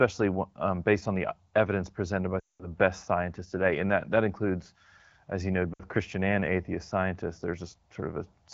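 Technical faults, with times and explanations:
2.39–2.68 s and 5.73–5.82 s, lost AMR speech frames: after "uh evidence presented by", about 200 ms of speech fails to decode before "best scientists today", and after "includes as you know" a 60 ms gap does the same. The AMR-WB decoder repeats the last good pitch and formant settings at falling gain, so the sound drops to near silence within two frames, then returns thin. On a spectrogram, formants flatten into fading horizontal bands, and the waveform envelope tapers toward silence.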